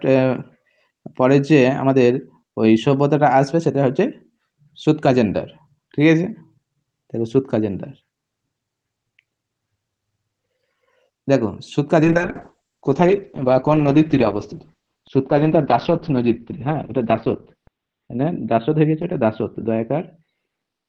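At 12.04 s the sound turns muffled and coarse, with the top end cut from around 12 kHz to 4 kHz, and stays that way to the end. This is a call bitrate drop: the encoder was starved of bits, which fits a fall from 32 kbps to 8 kbps.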